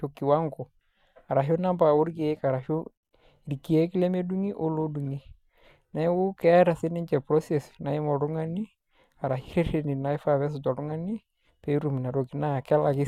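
A speech recording with no technical fault present. Nothing in it needs flagging at any point.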